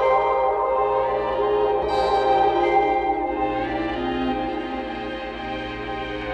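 Nothing in the audio stood out as a technical fault on listening.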